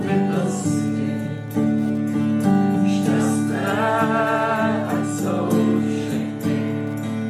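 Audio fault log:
throughout Wi-Fi interference: the audio circuit rectifies a nearby Wi-Fi beacon sent every 102.4 ms, adding a faint tick about ten times a second, about 40 dB down.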